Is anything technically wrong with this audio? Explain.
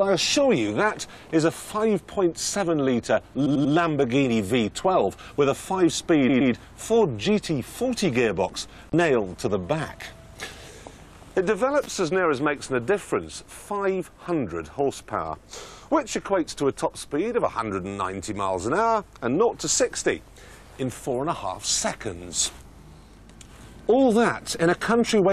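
Yes. Repeated frames: at 3.45 s a 92.9 ms block of compressed audio was decoded three extra times, and at 6.28 s a 116.1 ms block twice more. Each sounds like a stutter, adding 0.28 s and 0.23 s.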